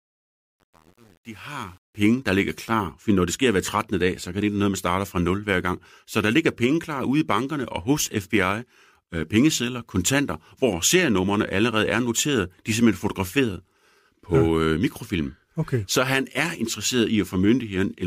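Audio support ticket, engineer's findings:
Truncation distortion on a fade-in, 0.00 to 2.06 s, worst up to 1.86 s, ending before "der ligger klar". Gritty low-level speech. Likely an undithered gain stage, consistent with 8-bit word length, quantising quiet samples into coarse steps. Fade-in ends at 2.06 s.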